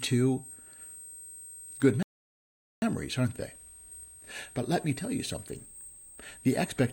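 A steady 8 kHz tone runs under the speech from start to finish, sitting roughly 20 dB below it. This is USB whine: current drawn in 125-microsecond microframes leaking through power or ground. On a spectrogram it is an unbroken horizontal line at 8 kHz.

At 2.03 s the audio drops to silence until 2.82 s, then picks up exactly where it stopped. This is a rebuffering stall: the player ran dry and waited for data, adding about 0.79 s. The waveform shows a flat gap with nothing missing either side.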